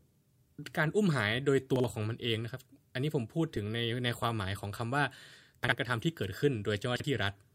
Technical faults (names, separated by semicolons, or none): chunks out of order